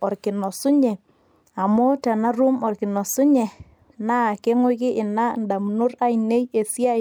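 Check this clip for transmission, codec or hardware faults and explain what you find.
No such fault can be heard here.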